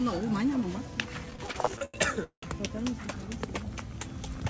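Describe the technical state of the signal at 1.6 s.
At 1.6 s the audio is inside a run of repeated stalls (stutter), from 1.26 s to 2.44 s. Packets arrived late, so the jitter buffer kept running dry. There are 12 gaps, and the receiver stretched the last sound to fill each one, 425 ms in all. The longest gap lasts 188 ms. Nothing is lost, but the sound drags and hiccups. Through the G.722 call path, nothing reaches above 8 kHz.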